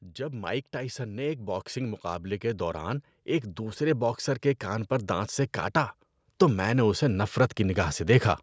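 From about 0.16 s through 5.85 s there's automatic gain rising: the gain control decided the speech was coming in too quietly and kept nudging its gain up, ending roughly 11 dB higher. Because it's a slow ramp over more than five seconds, you hear the voice and the room noise behind it swell together, like someone gradually turning up a fader, rather than any sudden jump. The call microphone processing's bandwidth tops out at 8 kHz.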